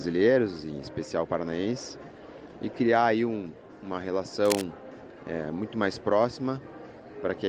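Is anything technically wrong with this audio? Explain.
Yes. From 4.45 to 4.64 s there is cable scratch noise, likely from a worn cable or connector shifting so its contact resistance fluctuated rapidly. That injects dense, irregular bursts of scratchy rustling over the sound, only slightly quieter than the audio itself.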